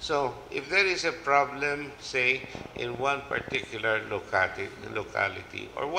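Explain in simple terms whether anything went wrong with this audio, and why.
From 2.44 to 3.65 s there is a train of clicks: about fifteen sharp ticks at roughly 11.7 per second, unevenly spaced and sitting on top of the sound. The likely cause is electrical interference from nearby equipment, a faulty connection or a faulty power supply.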